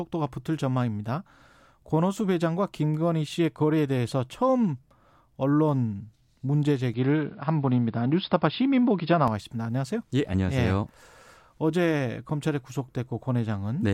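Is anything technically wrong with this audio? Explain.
Yes. From 6.94 s to 9.28 s the speech suddenly loses everything above 5.2 kHz, turning dull and boxy. The level shifts by roughly 5 dB, and a faint new background noise appears well below the speech. There is no gap at either transition, and the full bandwidth returns at 9.28 s. This is likely an input switched to a poorer device: another input device with a narrower passband and its own noise floor and gain was active for that span.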